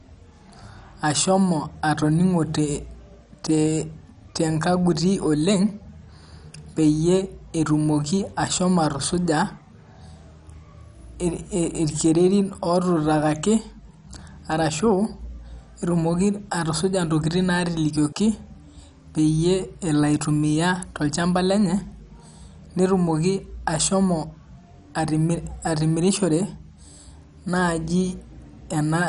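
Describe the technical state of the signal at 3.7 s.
At 3.7 s, as through the whole clip, the speech carries MP2 compression damage, likely from a low-rate encode around 48 kbps. Starved upper sub-bands are dropped, leaving nothing above 11.3 kHz, and the remaining bands sound coarse, dull and gurgling.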